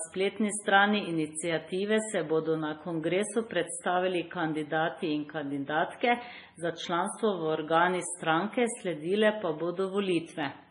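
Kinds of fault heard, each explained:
Transcoding between lossy codecs: The speech has the smeared, swirly coding artefacts of a very low-bitrate MP3 stage, with a cleaner, higher-rate WMA layer on top, likely from re-encoding an already compressed file. The later codec cannot restore what the first discarded, so both sets of artefacts remain audible together. A spectrogram shows a hard ceiling with nothing above 10.6 kHz, plus blocky, patchy energy in the upper bands.
Clock slip clicks: Faint, evenly spaced ticks run from about 0.36 s to 10.43 s, roughly one every 0.7 s, around fifteen in all. They are likely caused by two devices running on unsynchronised clocks that differ by some tens of parts per million, so a single sample is dropped or repeated whenever the drift reaches one whole sample. On a waveform each tick is a tiny one-sample step, and on a spectrogram it is a thin vertical line during speech, absent in pauses.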